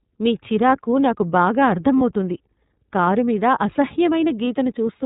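The whole clip runs through the iLBC codec: it's band-limited with nothing above 4 kHz, and the speech sounds plainly rough and a bit synthetic, consistent with iLBC's 30 ms frame mode. At 1.98 to 2.02 s, right after "మీ చిరాకు నాకు బాగా", there's a lost iLBC frame. The decoder fills the gap, about 30 ms and likely one packet, with a brief buzzy held vowel, then recovers immediately.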